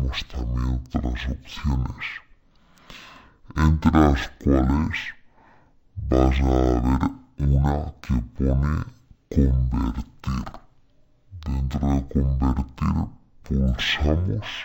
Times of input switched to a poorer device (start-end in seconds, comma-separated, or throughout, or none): none